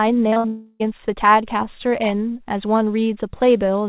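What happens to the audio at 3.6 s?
Nothing goes wrong at 3.6 s: the speech there carries on intact, with only the narrow telephone bandwidth of the call path, which leaves nothing above 4 kHz.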